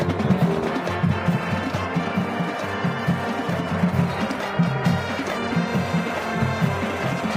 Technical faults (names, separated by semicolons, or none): timecode bleed